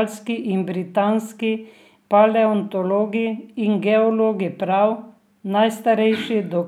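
Nothing in this recording trips up the ear, with no glitch, dropout or other technical fault turning up anywhere in it.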